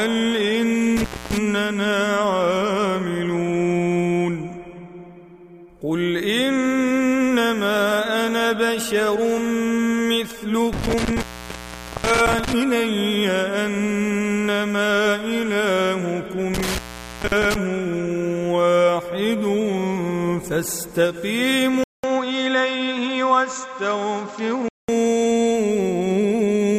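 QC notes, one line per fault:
0.97–1.38 s, 10.73–12.53 s, 16.54–17.55 s: intermittent contact. The sound drops out for 0.26, 0.81 and 0.54 s with crackle at each edge, as a loose connection opens.
21.84–24.89 s: input switched to a poorer device, likely. After a 0.2 s gap the sound turns dull, with nothing above 7.6 kHz and new noise about 30 dB down, at roughly the same level.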